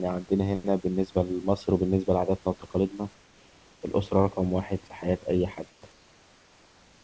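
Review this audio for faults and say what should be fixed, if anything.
At 2.60 to 2.62 s, a 20 ms slice of the speech gives way to a flat, featureless hiss, losing about 10 ms of real sound before the speech resumes. This is sound dropped by the voice detector: the detector likely misjudged a quiet speech moment as background and stopped sending, so the receiver filled in comfort noise. Unlike a packet-loss gap, there is no concealment smear or repeated fragment, just a clean switch to steady noise mid-speech. Giving the voice detector a longer hangover time and less aggressive thresholds would keep quiet speech segments from being cut.

From 3.14 to 3.82 s, 5.70 to 5.82 s and 5.92 s to the end, the real room background is replaced by comfort noise in place of the background. It is a smoother, detail-free hiss about 3 to 4 dB quieter than the genuine room noise, which otherwise sits about 32 dB below the speech. 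The cause is likely discontinuous transmission, with the receiver synthesising noise during pauses. What separates it from a dropout is that no speech is missing. Only the background's texture and level shift at each pause boundary. Disabling discontinuous transmission, or matching the comfort noise level and spectrum more closely to the real background, would hide these switches.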